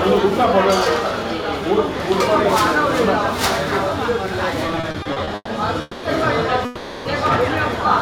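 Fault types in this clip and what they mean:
Repeated stalls (stutter): Between 4.67 and 5.49 s the sound catches nine times, each time holding its last bit of sound before moving on. Packets were reaching the receiver more slowly than they were being played, so its jitter buffer kept running dry and had to paper over the holes. About 300 ms gets filled this way, the longest hold around 120 ms, roughly a third of that stretch. Nothing is dropped, it just drags.
Call audio freeze: The sound hangs twice, holding and carrying on its last moment instead of going quiet, at 5.81 to 6.05 s for about 220 ms and at 6.65 to 7.07 s for about 400 ms. Each time it then resumes right where it left off, so nothing is lost, but the timing slips later by the length of the hold. That pattern is likely packets getting held up in transit and leaving the receiver's jitter buffer empty for a moment.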